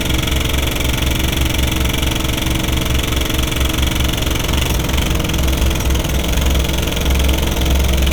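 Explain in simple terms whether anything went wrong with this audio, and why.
Nothing went wrong here: no audible technical fault turns up anywhere in the recording.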